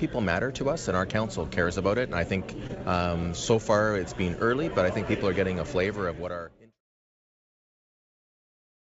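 At 2.67 to 2.71 s there is a short concealed packet loss. About 20 ms of audio arrived too late for the decoder. The receiver extended the preceding sound to cover the gap, then blended back. It is heard as a brief smear or wobble, over a call-codec band that stops at 8 kHz.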